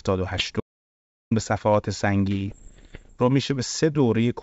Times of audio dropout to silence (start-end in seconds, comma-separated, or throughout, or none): 0.60-1.31